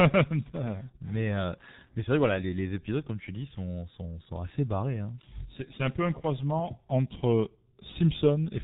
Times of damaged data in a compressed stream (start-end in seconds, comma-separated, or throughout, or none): none